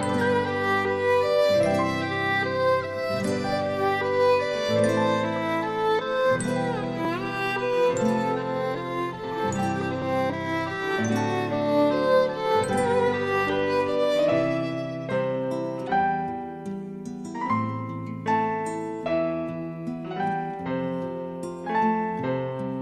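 At 7.05 s and again at 10.02 s the audio jumps abruptly, skipping roughly 20 ms and then about 10 ms. A dropped buffer (overrun) is the likely cause: samples were overwritten before being read, so the two sides join directly. Unlike a gap, no silence is heard.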